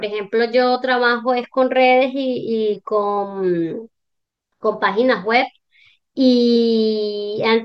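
Compressed frames skipped occur at 0.75 to 0.77 s and again at 6.55 s in this speech. Each time, the decoder never plays a stretch of the encoded stream, either because the frames are absent or because they were rejected as damaged. The audio lurches forward by roughly 50 ms, which fits two frames of about 23 ms each.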